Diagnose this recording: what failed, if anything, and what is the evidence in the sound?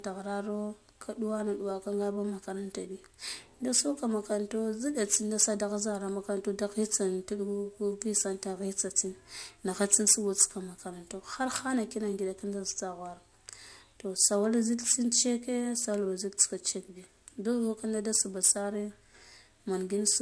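Aliasing runs throughout the speech, introduced at a sample-rate conversion step. Sibilants sound gritty and metallic, and energy runs hard up to an edge at 11 kHz. That points to a drop from 44.1 kHz to about 22 kHz with no anti-alias filter, so content above 11 kHz folds back into the band, roughly 20 dB below the speech. Unlike a codec's swirling, time-varying artefacts, these false tones are steady and tied to the high-frequency content.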